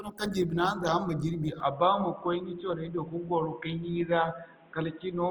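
From the start, the speech has a grainy, rough texture, with tones turning noisy rather than swirling. Content still reaches about 20.4 kHz. This points to Opus compression, likely in its music mode at a low rate near 24 kbps.

At 1.60 s the sound turns dull and boxy, and stays that way to the end. Nothing remains above 3.8 kHz. The level holds steady, with no gap at the change. A faint new noise floor sits about 35 dB down. This is likely an input switched to a poorer device.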